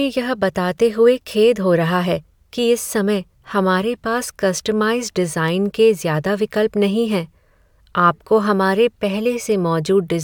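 Nothing technically wrong turns up in this bit of speech; there's no fault here to point to.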